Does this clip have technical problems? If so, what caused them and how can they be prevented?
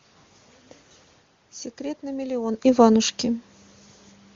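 No, nothing here points to a technical problem, so there's nothing to fix or guard against in this one.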